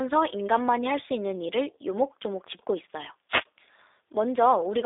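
From start to finish the speech passes through a G.729 codec. Nothing above 3.7 kHz survives, and little below 300 Hz. The sound fits an 8 kbit/s G.729A coder. It rebuilds speech from a filter, a pitch predictor and a few pulses per frame. The result sounds plainly rough and synthetic.

At 3.29 s a wireless microphone noise hit begins. It ends at 3.45 s. The radio signal faded briefly as reflections cancelled. Receiver noise rose over the speech. It is heard as a short swish of static.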